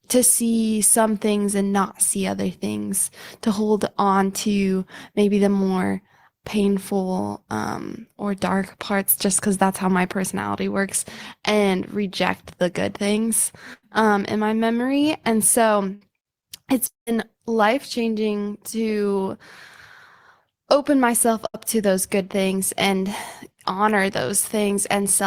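At 13.73 s (to 13.85 s), 15.95 s (to 16.03 s) and 21.47 s (to 21.56 s), bursts of packet loss briefly freeze the speech into a held buzz or fading hiss. Roughly 100 ms, 60 ms and 80 ms of speech are skipped before it resumes.

From 16.87 to 17.09 s the same kind of held, fading sound runs longer and then gives way to about 150 ms of silence, with about 200 ms of speech lost. That silence after the fill sets this apart from the short bursts and marks a likely long network dropout.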